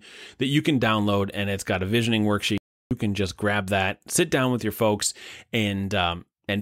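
At 2.58 s, just after "it's got a visioning", the speech cuts out abruptly and the output falls completely silent for about 0.33 s, until 2.91 s, when it picks up again with "can just grab that". This is a playback stall. The gap sounds like a hard drop-out rather than a natural pause. The likely cause is the player briefly running out of buffered data, or its output thread being blocked, so nothing reached the output until it recovered.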